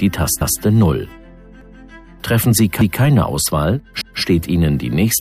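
The audio has overlapping chunks. At 0.41, 1.61, 2.81 and 4.01 s, a 200 ms stretch plays twice, heard as a click or stutter at each join. The audio was handled in 1.0 s chunks, and each new chunk began 200 ms before the previous one ended, so the repeats recur every 1.2 s. Unlike a dropout, where material goes missing, nothing here is lost; the same short stretch is heard again.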